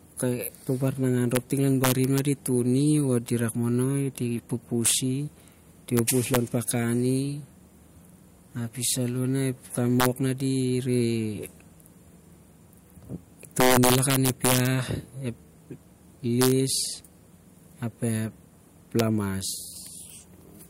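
Integer overflow cracks through the speech at 1.35 s, 1.84–2.19 s, 4.86–4.94 s, 5.97–6.37 s, 10.00–10.06 s, 13.60–14.67 s, 16.42–16.52 s and 19.0 s. A gain stage drives loud peaks past the integer ceiling, by about 0 to 5 dB, the most around 13.60–14.67 s. Instead of being limited, those samples wrap to the opposite sign and jump across the full range. The result is violent, harsh cracks on loud syllables, far sharper than ordinary clipping.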